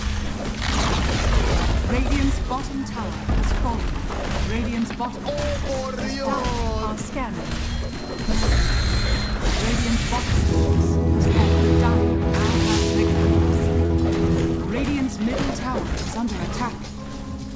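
Short concealed packet loss at 13.86 to 13.92 s: about 40 ms of the call's audio failed to reach the decoder in time, and the receiver covered roughly 38 ms of that gap by extending the sound that came just before it, then crossfading back into the real signal. It comes across as a brief smear or wobble in the sound, heard against a band that stops at 8 kHz, which fits the G.722 call codec at 64 kbps.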